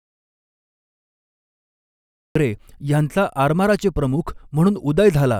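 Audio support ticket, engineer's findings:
Audio dropout to silence, 0.00 to 2.35 s. Already under way when the clip begins. Dead silence, no room tone, then speech comes in mid-flow. Likely cause: input lost upstream, such as a disconnected mic, failed link or stray mute, while the recorder kept writing silence. Speech in that span is unrecoverable. Check cabling and mute state.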